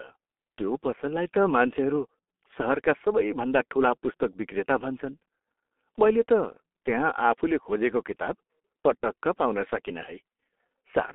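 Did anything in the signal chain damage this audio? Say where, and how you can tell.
Yes. Throughout the speech, the sound is muffled and hoarse, with smeared consonants and nothing above roughly 3.5 kHz or below about 250 Hz. That points to the codec stage, heavy G.723.1 coding, which fits a 6.3 kbit/s setting: long 30 ms frames and a slowly updated voice model blur fast detail.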